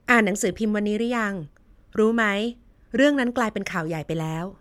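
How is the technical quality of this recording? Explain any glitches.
Nothing stands out here; the speech comes through without any glitches worth pointing to.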